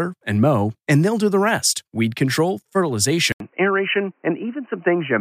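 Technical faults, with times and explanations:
3.32–5.20 s, input switched to a poorer device: after an 80 ms gap the speech turns dull and boxy, with nothing above 3 kHz and faint new hiss, likely a narrower-band microphone. A spectrogram shows the upper band abruptly emptying; the waveform shows a brief flat gap.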